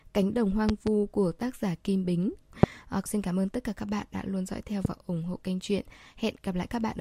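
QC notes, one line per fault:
0.69–0.89 s, loud pop: two sharp pops in quick succession, peaking roughly 20 dB above the speech, just before "của tác giả". A sudden voltage pulse, likely from a switch, plug, static or driver glitch, sits on top of the signal while the speech continues underneath.
2.63–2.66 s, loud pop: a single hard click about 25 dB above the speech, likely a similar brief electrical pulse shaped by the circuits after it.
4.85–4.88 s, loud pop: one pop about 15 dB above the speech, between "đã luôn dõi theo" and "ủng hộ kênh truyện", likely the same kind of stray electrical pulse.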